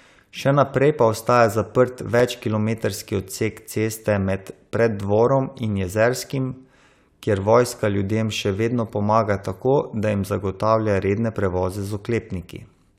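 At 2.20 s, right after "naprej pa ostaja zaprt" and before "kilometrski odsek ceste med", there is a block of digital silence. The signal drops to zero for about 1.45 ms, which fits a 64-sample block. The output buffer was likely not filled in time, so zeros went out instead. The speech stops and restarts with no fade. Both edges land so close together that the gap is heard as a tick or dip rather than as silence.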